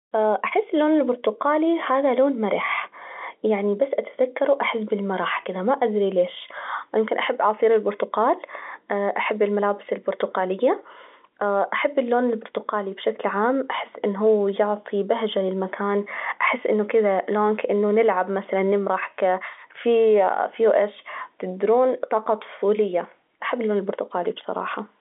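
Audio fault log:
Nothing to log here: the speech sits in an ordinary phone-line band of roughly 250 Hz to 3.6 kHz with nothing above 3.8 kHz, just as the G.711 telephone coding on this line would give, and no fault turns up anywhere in it.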